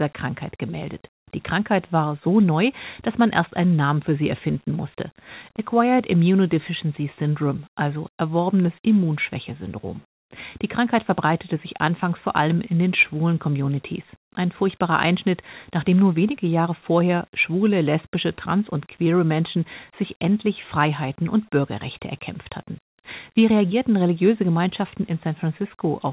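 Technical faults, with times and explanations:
No faults; the speech comes over a call path with nothing above 4 kHz, which fits a G.711 mu-law link at 64 kbps.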